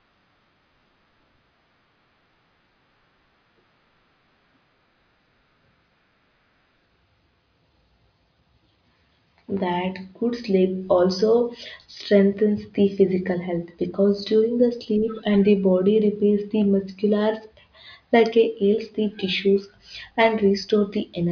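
Nothing in this speech recording stands out as a technical fault, so there's no timeline of problems to walk through here.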